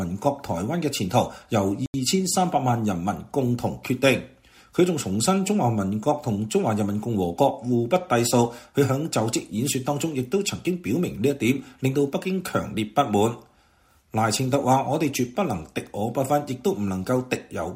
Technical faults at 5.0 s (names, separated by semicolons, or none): none